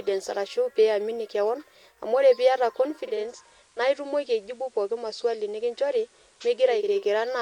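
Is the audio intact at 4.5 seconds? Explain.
No. From 2.92 to 7.08 s the radio blends from digital to analogue FM over 459 ms. The level drops about 2 dB, and faint hiss appears.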